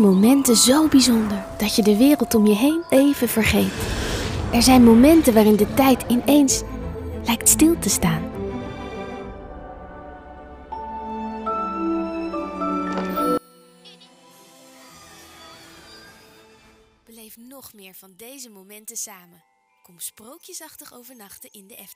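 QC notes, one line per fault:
13.38 to 21.95 s, one channel inverted: from 13.38 s to the end the summed level falls by about 26 dB, leaving only a faint residue where the content common to both channels had been. The likely cause is one stereo channel flipped in polarity, so material common to left and right cancels on mono summing and only the small difference between the two channels survives, which accounts for the weak sound.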